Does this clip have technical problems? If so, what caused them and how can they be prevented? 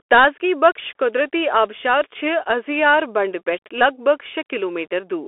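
Yes. Throughout the clip the speech was carried over a Bluetooth CVSD headset codec, the narrowband link that encodes each sample as a single up-or-down bit and adapts its step size, which fits a 64 kbps stream. The sound is confined to roughly 300 Hz to 3.4 kHz with nothing above 3.8 kHz, so it is thin and muffled. The codec damage is plainly audible: the step size can't keep up with fast loud changes, leaving distortion and scratchy s sounds, with a granular hiss under the speech. To prevent it, record through a wired microphone, or use a headset and connection that support the wideband mSBC or LC3 voice codecs.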